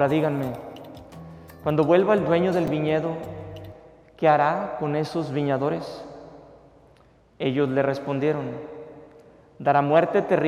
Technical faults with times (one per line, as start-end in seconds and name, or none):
2.67 repeated buffer